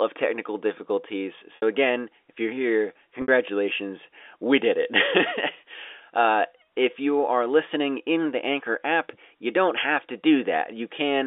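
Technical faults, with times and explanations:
1.56–1.62 s and 3.22–3.28 s: packet loss with pitch repetition. Each gap lasts 60 ms, which fits three lost 20 ms packets. The first falls between "technical difficulties" and "again if you're here", and the second comes just after "again if you're here". The receiver fills each hole by looping the last pitch cycle, so the sound briefly turns buzzy and static. That repeated cycle fades over roughly 50 ms before a short cross-fade back into the G.711 telephone-band signal.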